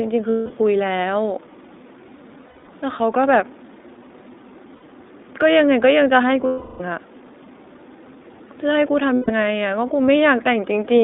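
Throughout, the speech passes through the iLBC codec. The band runs only from 250 Hz to 3.7 kHz. Each frame is coded on its own, which fits 20 ms frames at about 15 kbps. The damage is plainly audible: the voice sounds rough and synthetic.

Lost iLBC frames occur at five points: 0.30 to 0.52 s, 2.48 to 2.69 s, 4.76 to 4.83 s, 6.46 to 6.81 s, and 9.14 to 9.31 s. Packets dropped, and the decoder repeated the last pitch cycle with added noise. Each gap sounds like a held, buzzy vowel. The longest, at 6.46 s, fades. At 2.48 s the losses are scattered, in short bursts. The voice is right again almost at once.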